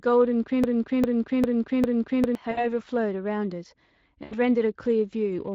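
Throughout the speech, the Speex codec damage is plainly audible. The CELP coder has too few bits for the excitation, so voiced sounds come out hoarse and grainy, which fits a Speex stream at roughly 20 kbps. On a spectrogram, harmonics look smeared and broken up by noise between them, and any energy above 8 kHz appears as a diffuse, evenly shaded wash rather than distinct structure.

From 0.64 s to 2.35 s there is a broken-record loop. A 400 ms fragment plays four times back to back, most likely because the player or stream stalled and kept resending its last buffer. The audio meant for that stretch is gone. The waveform shows the same envelope repeating at identical 400 ms intervals, and the spectrogram shows a block of pattern copied exactly, with hard seams where each pass restarts.

At 2.51 to 2.67 s, VoIP packet loss concealed by the speech codec covers about 60 ms of missing audio. 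The decoder stretches the last pitch and filter into a fading sound, and the voice stays thin briefly after audio resumes. The spectrogram shows the held sound dimming gradually, and the waveform shows it shrinking in amplitude. The same concealment returns at 4.23 to 4.35 s over about 80 ms, giving a slightly longer concealment and a deeper fade before speech recovers.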